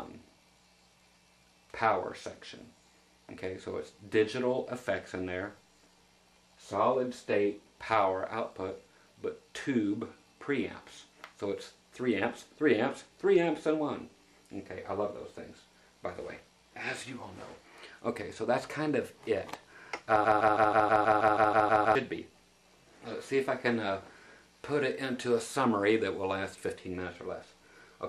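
At 20.25 s the playback chain likely stalled, so the player, encoder or stream kept re-sending the last fragment it held instead of fresh audio. This is a broken-record loop: a 160 ms slice plays 11 times back to back, a rapid mechanical stutter lasting until 21.95 s. Whatever should have sounded during those 1.7 seconds is lost, and the audio resumes further on rather than picking up where it stuck.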